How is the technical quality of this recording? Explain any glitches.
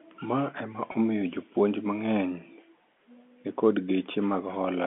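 One brief glitch stands out over the narrow telephone band of the G.711 coding. It is a packet loss with pitch repetition at 0.92 to 0.94 s. About 20 ms of audio, which points to a single lost packet, went missing. The receiver filled it by repeating the last pitch period, so the sound holds with a slight buzz. A waveform would show identical repeated cycles there, and a spectrogram would show a short patch of flat, unchanging harmonics.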